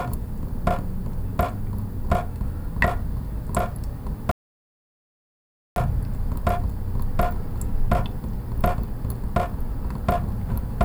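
A recording of sounds with an audio dropout to silence from 4.31 to 5.76 s, about 1.45 s lost. The gap is silent with no room tone, unlike a quiet passage or noise gate, which points to a likely input loss while recording continued.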